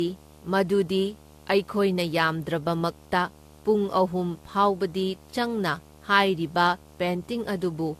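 From the first moment to the end of the speech there's a video or display buzz sitting underneath. It's a steady 75 Hz buzz with some hash riding on top, roughly 25 dB down from the speech, so it's always there but never swamps anything. That's a screen or its cable coupling into the audio path, with the buzz locked to the picture's field rate rather than to the mains.

Running right through the clip as well, the speech has a swirly, smeared, hollow quality, and consonant attacks come out blurred instead of crisp. Nothing survives above 14.2 kHz. The texture is worse than a single lossy encode should leave, which points to generation loss, most likely from several passes (around four) through AAC-LC at something like 64 kbit/s. Each re-encode quantises again on a shifted frame grid, so the noise and spectral holes stack up.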